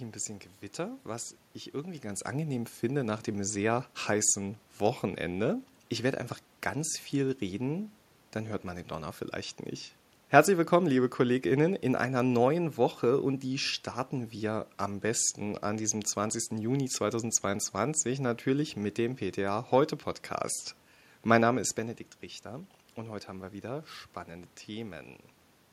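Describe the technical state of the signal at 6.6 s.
At 6.6 s the signal is intact, with no dropout, distortion or other technical fault, only the room noise of the recording space beneath the speech.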